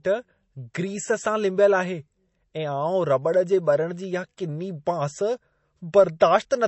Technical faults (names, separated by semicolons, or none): MP3 compression